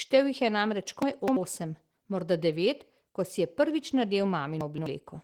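Speech carrying plainly audible Opus voice compression throughout: at 16 kbps in hybrid mode the coarse excitation leaves it hoarse and slightly robotic. Chunks out of order at 1.02–1.37 s and 4.61–4.86 s: roughly 85 ms blocks play late, causing jumbled moments.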